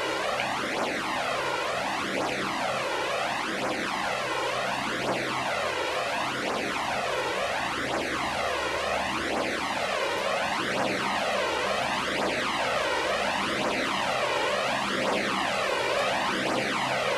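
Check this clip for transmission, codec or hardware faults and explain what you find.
Nothing stands out here, just the sounds coming through with no glitches, dropouts or other transmission, codec or hardware trouble to point to.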